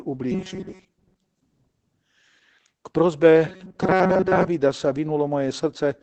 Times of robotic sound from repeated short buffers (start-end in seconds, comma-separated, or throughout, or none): 0.32-1.40, 3.47-4.47